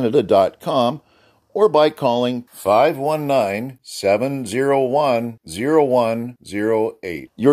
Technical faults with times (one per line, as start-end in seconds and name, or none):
none